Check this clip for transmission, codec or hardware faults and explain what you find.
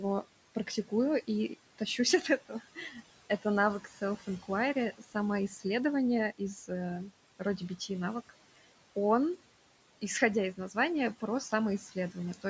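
The clip's faults come from noise suppression on a call. The suppressor alters the background throughout and, in four stretches, cuts into the speech itself.

Noise suppressor artifacts run through the whole clip. Between phrases the background sinks away, and what remains of it rises under the voice. The suppressor estimates the steady room noise frame by frame and turns those bands down, here by about 18 dB. The room noise itself sits about 17 dB below the speech.

Speech cut by the noise suppressor occurs from 0.0 to 5.65 s, 6.38 to 6.7 s, 7.39 to 8.31 s and 10.02 to 12.45 s. In these spans, soft consonants and word endings sound swallowed or faint, dropping by up to about 14 dB (about 13 dB in the third span). In total, roughly a second is affected in the first span, a brief moment in each of the next two, and about a third of a second in the last. The suppressor mistook these quiet speech sounds for noise and lowered them along with the background. 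The call's microphone processing also limits the audio to nothing above 8 kHz, which is normal for this path.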